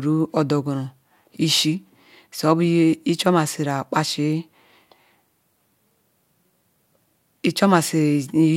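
No technical faults are audible.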